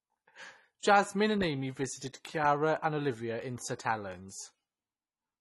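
AAC compression runs through the whole speech recording, likely from AAC-LC encoding at a low rate, with the dullness and damage pointing to roughly 32 kbps. The encoder had too few bits to describe every frequency band, so it removed everything above 12 kHz and coarsely quantised what remained. The voice sounds muffled and lacks air. Sibilants turn fizzy and smeared, and sustained vowels carry a warble as the band-by-band detail shifts from frame to frame.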